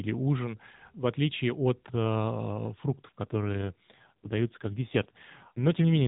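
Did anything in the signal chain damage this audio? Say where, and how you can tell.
Yes. The damage is at the network and codec stage: an AMR rate drop beginning at about 3.24 s and lasting to the end of the clip. The band stays confined below 4 kHz, as it does throughout this AMR-NB mobile call, and no gap appears, but the speech turns rougher, buzzier and more synthetic. That fits the network forcing the codec down from around 12.2 kbps to about 5.9 kbps, leaving fewer pulses per subframe to model the voice.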